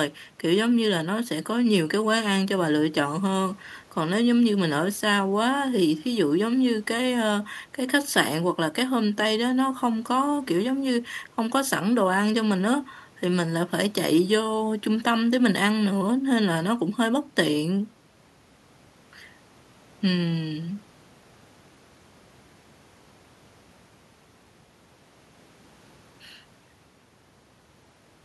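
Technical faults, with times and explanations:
Nothing in this speech recording registers as a technical fault. There is no point in the audio where a problem can be heard.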